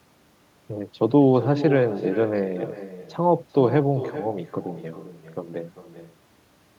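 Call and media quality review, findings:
Echo with no canceller, throughout. Speech shadowed roughly 0.4 s later by a thinner copy about 13 dB down. Far-end loudspeaker feeds its microphone, and no echo canceller strips it before the return path.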